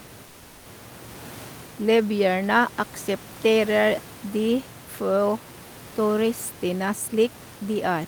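Comfort noise in place of the background, from 0.25 to 0.65 s: for about 400 ms the room noise, which otherwise sits about 23 dB below the speech, gives way to a smooth, featureless hiss about 3 dB quieter. The cause is likely discontinuous transmission, with the sender pausing because its voice detector heard no speech, which fits Opus DTX, and the receiver filling the gap with synthetic noise roughly matched to the background.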